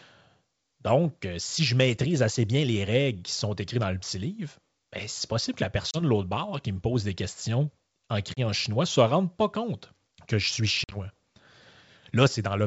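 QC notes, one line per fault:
5.91–6.03 s, packet loss on an ADPCM call: about 30 ms drops to silence between "c'est possible que la" and "de l'autre bord qui". The decoder's predictor loses track, so the sound comes back slightly distorted.
8.34–8.40 s, packet loss on an ADPCM call: another 30 ms hole after "pose des questions en", hard-edged, with a brief, slightly distorted re-entry at "chinois ne se rende" while the decoder resyncs.
10.84–10.97 s, packet loss on an ADPCM call: several packets gone after "compte que je suis", about 60 ms lost across 80 ms, the longest gap 50 ms. The adaptive step size keeps getting knocked out, so it sounds choppy and distorted.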